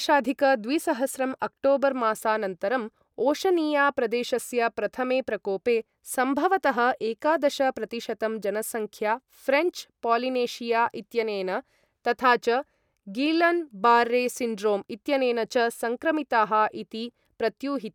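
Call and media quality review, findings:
Nothing to flag on this speech clip; no faults turned up anywhere in it.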